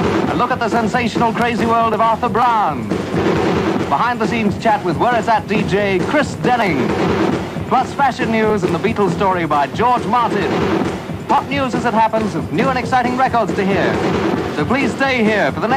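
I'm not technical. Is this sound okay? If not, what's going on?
No. A train of clicks, likely from nearby electrical interference or a faulty connection or power supply, puts about 30 uneven ticks, roughly 12.5 per second, over the sound from 5.84 to 8.17 s.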